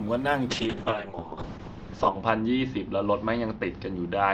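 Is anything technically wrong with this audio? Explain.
Yes. From 0.5 s to the end, the speech turns rough and watery, and its brightness disappears as the top of the spectrum narrows from 20 kHz to 8 kHz. This is a call bitrate drop: the call's bandwidth estimate fell and the encoder was forced to code far more coarsely. The sound fits a fall from around 40 kbps to about 6 kbps, bottoming out for roughly 1.7 s, and it does not recover before the clip ends.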